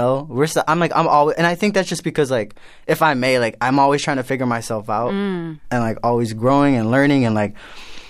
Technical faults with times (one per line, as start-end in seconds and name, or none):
none